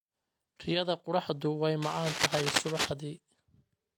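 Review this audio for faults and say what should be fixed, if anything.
Throughout the speech, coarse low-bitrate artefacts persist and nothing is present above 18.5 kHz, which likely fits a 40 kbit/s HE-AAC encode later resaved as high-bitrate MP3; low-bitrate audio saved at a high bitrate cannot recover what was discarded. Re-export from the original uncompressed source instead of transcoding.

From 1.81 to 2.89 s, just after "qorraxdu way", dense uneven scratching sits at roughly speech level, likely cable scratch noise from a worn connector being moved. Replace or reseat the cable and keep it still during recording.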